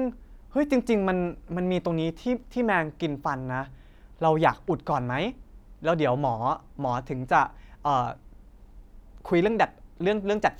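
No technical faults can be heard anywhere in the recording; the speech signal stays steady and intact throughout.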